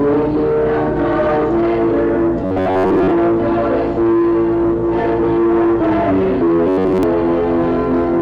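Robotic sound from repeated short buffers appears at 2.46–3.12 s and 6.67–7.03 s: a rigid, metallic buzz fixed at 93.8 Hz. The likely cause is repeating a roughly 10.7 ms chunk for most of each span. Unlike a dropout, no gap appears.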